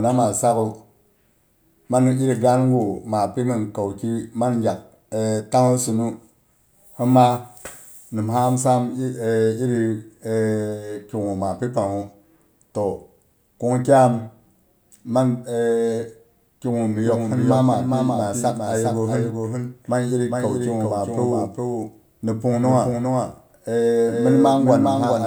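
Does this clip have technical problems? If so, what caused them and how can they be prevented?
Yes. From 17.05 s to the end, the speech has a doubled audio track. A second copy trails roughly 0.4 s behind, about 5 dB quieter, and starts abruptly. This is likely from a second, slower capture path or misaligned duplicate in the edit. Monitor with only one input route active and remove stray duplicate regions before export.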